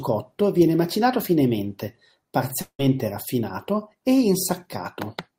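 From 2.61 to 2.81 s a long network dropout, likely from lost packets, cuts into the speech. The last sound smears into a fading buzz, then near-silence, and speech resumes with 180 ms gone. A spectrogram shows blurred, decaying bands, then an empty gap.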